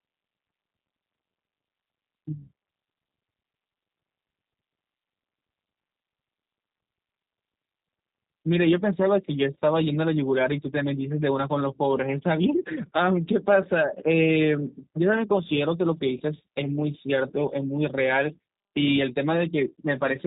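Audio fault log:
throughout G.729 codec: the speech sounds slightly rough and synthetic, with a plainly audible coarse edge and nothing above 4 kHz. The sound is rebuilt from a vocal tract filter, a pitch predictor and a few pulses per frame, which fits 8 kbit/s coding.
16.18–16.22 s VoIP packet loss concealed by the speech codec: a 20 ms stretch turns into a smeared continuation that sags in level. That fits two lost 10 ms frames, with the decoder repeating its last pitch and filter at falling gain. The damage carries briefly into the returning speech.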